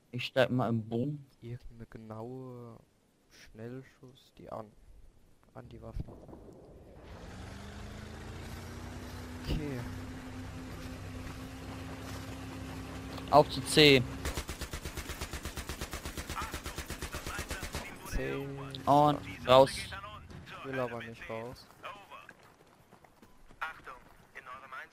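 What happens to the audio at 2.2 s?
The audio briefly hurries at unchanged pitch, running about 11% fast from 1.85 to 2.35 s: a jitter buffer speed-up, trimming roughly 70 ms of pitch periods to cut excess delay.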